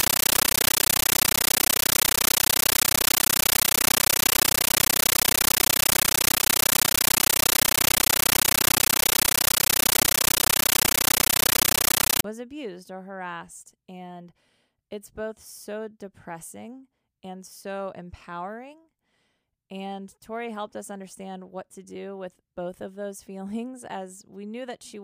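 From 0 to 12.24 s, loud chattering static replaces the speech. This is a compressed stream played as audio. Coded data was treated as samples, not decoded. Noise bursts of 13.3 ms repeat 31.25 times a second. This fits a 640 kbps AC-3 stream.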